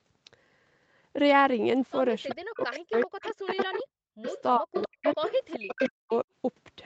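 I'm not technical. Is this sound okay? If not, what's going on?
No, this call recording has two problems, and they are tangled together.

The first is an echo leak. Someone on the other end of the call was likely listening on a loudspeaker, and their phone didn't fully cancel what its microphone picked up. A delayed copy of the voice comes back, trailing about 0.39 seconds behind: a brief scrap at 2.29 to 2.33 seconds, then longer stretches from 2.71 to 3.8, 4.26 to 4.42, and 4.73 to 6.17 seconds. That last stretch is the loudest.

The second is speech suppressed in double talk. From 2.32 to 4.26, 4.58 to 5.05, and 5.55 to 6.27 seconds, the main voice dips sharply, sometimes almost to silence, or drops out in pieces. This likely happened because both sides were sounding at once and the echo canceller turned everything down. The echo adds an extra, late repeat of the voice. Here, instead, the voice itself gets quieter or goes missing.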